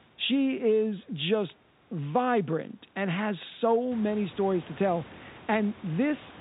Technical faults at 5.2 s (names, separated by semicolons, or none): none